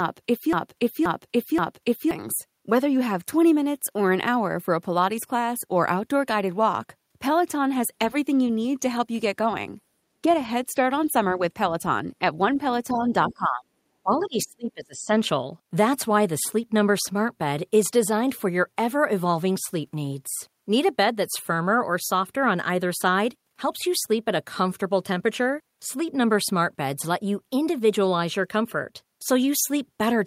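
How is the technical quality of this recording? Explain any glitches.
The recording has three kinds of glitch, clustered at the very start and around 11 to 15 seconds.

From 0.0 to 2.11 s the sound is already caught in a broken-record loop: the same 0.53 s fragment plays back to back three times. Likely the player or stream stalled and kept resending its last buffered piece, so the audio meant for those seconds is lost.

Between 11.34 and 15.14 s the talker's speech dips and drops out in pieces, the kind of speech suppression that comes with double talk. There is a slight dip at 11.34 to 11.42 s, a deeper one of about 10 dB at 12.92 to 13.07 s, near-silence at 13.28 to 13.73 s, and roughly a second heavily muted from 14.03 to 15.14 s. The echo canceller, unable to separate this talker from loudspeaker echo, was likely turning both down.

Brief scraps of the other side's voice leak through at 13.3 s and 14.2 s, each very faint, about 20 to 25 dB below the speech. 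This points likely to the far end's loudspeaker output not being fully cancelled at the microphone.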